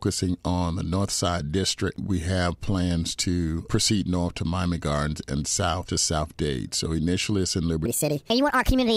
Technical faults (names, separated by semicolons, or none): section at the wrong speed